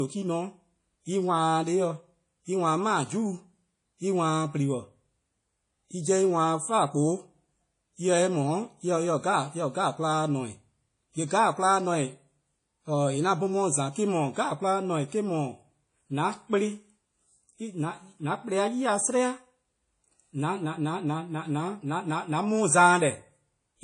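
Throughout the clip the speech has a ringing, washy quality, with a hiss that swells and fades along with the voice, and the top end is cut off with nothing above about 10.1 kHz. This is plainly audible damage from likely WMA compression: a transform codec with long blocks has smeared its quantisation noise across tens of milliseconds around each sound and discarded weak high components, which fits an early WMA encoder at a low bitrate near 32 kbps.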